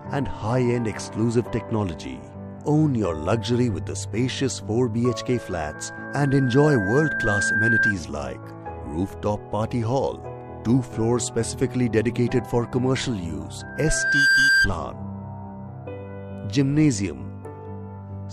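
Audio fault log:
5.32–7.94 s, loudspeaker feedback squeal: a steady 1.6 kHz tone creeps in and swells over a few seconds until it sits a little above the rest of the sound. The mic is hearing its own speaker, and at that one pitch the loop gain tops unity, so the tone feeds itself and keeps climbing.
13.60–14.69 s, loudspeaker feedback squeal: the same 1.6 kHz ring comes back, but it snaps up in well under a second and ends up clearly louder than the sound around it.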